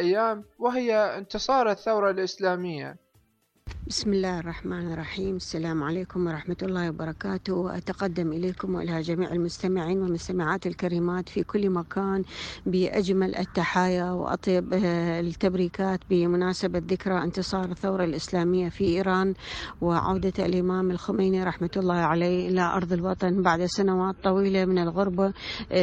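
At 21.83 s the quality drops abruptly and stays down right to the end at 25.83 s. It's an adaptive stream at a lower bitrate: the connection slowed and the player switched to a leaner version mid-flow, so there's no gap, just a sudden change. Codec artefacts come up, which fits a drop from roughly 128 kbit/s MP3 down to around 32 kbit/s.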